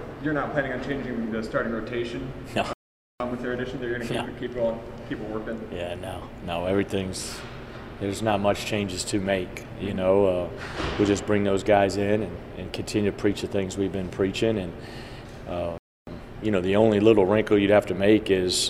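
The audio cuts out mid-flow twice into silence, once from 2.73 to 3.20 s for about 470 ms, and again from 15.78 to 16.07 s for about 290 ms, before carrying on. These gaps are playback stalls. The likely cause is the player running short of data, or its output thread being held up, so nothing reached the output until it recovered.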